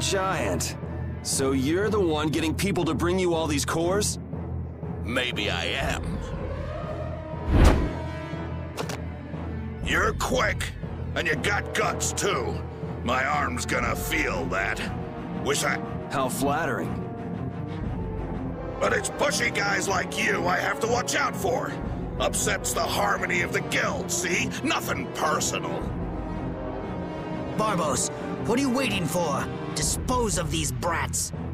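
There are no technical faults to describe in time order here.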